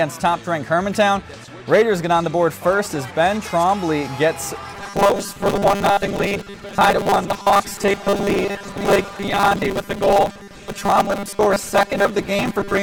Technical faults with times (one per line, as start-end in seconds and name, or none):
4.75-12.82 robotic sound from repeated short buffers